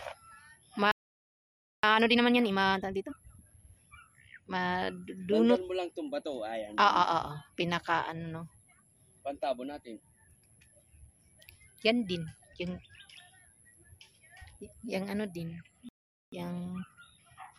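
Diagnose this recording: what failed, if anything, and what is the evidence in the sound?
Playback stall at 0.92–1.83 s and 15.89–16.32 s: the waveform flattens to silence, likely the player running out of buffered data or its thread blocking.

Time-compressed catch-up follows each gap, 1.83–3.65 s at 1.5x and 16.32 s onward at 1.1x. The player splices out and cross-fades fragments, so spectrogram harmonics hold pitch while events crowd together.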